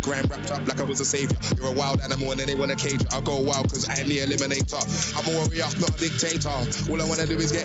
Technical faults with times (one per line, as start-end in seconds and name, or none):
none